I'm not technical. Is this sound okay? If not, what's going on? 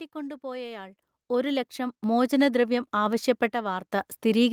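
No. The level of this speech jumps around in two different ways.

At 1.02 s, 2.04 s and 4.08 s you can hear a microphone volume step-up. The call software decided the microphone was too quiet and turned its input level up in one go. Each time, the voice and the background get louder together and stay louder. The first step is the biggest, and the later two are smaller. It only ever goes up, a notch at a time, as the software keeps correcting.

From 3.53 s to 3.90 s there is a sudden gain jump the other way. Everything drops noticeably quieter at once for about a third of a second, then snaps back. Unlike the step-ups, it is a brief dip that reverses rather than a lasting rise. That points to a digital level setting likely being applied instantly, without a smooth fade, rather than the microphone being adjusted.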